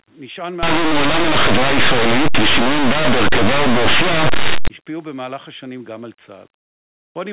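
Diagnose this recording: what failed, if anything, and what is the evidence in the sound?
The sample-format conversion failed: from 0.63 s to 4.68 s, linear 8-bit speech was read as if it were mu-law, producing very loud, harsh distortion. Samples just to one side of zero expand to maximum level. Ordinary 8-bit grain stays about 50 dB down and never sounds this loud.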